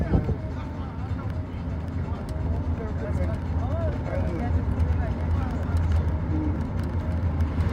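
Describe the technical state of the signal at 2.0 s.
At 2.0 s the signal is intact, with no dropout, distortion or other technical fault audible at that point.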